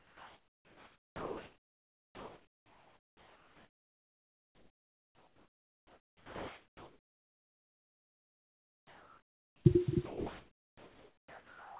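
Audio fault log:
0.00–9.65 s and 10.05–11.79 s, comfort noise in place of the background: The room background turns into a smooth, even hiss with no detail. It sits about 22 dB below the loudest speech and drops by about 5 dB in the first stretch and about 3 dB in the second. The likely cause is discontinuous transmission. The sender stopped sending audio, and the receiver filled the gap with synthetic noise. That noise is band-limited to 4 kHz, like the call path itself.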